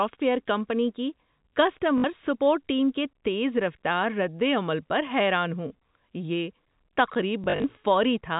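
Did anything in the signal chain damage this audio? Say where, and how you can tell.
Yes. Robotic stutters at 1.98 to 2.04 s and scattered across 7.44 to 7.64 s point to network packet loss with last packet repeated, replaying 60 ms and then 120 ms in a pattern that fits 20 ms packets.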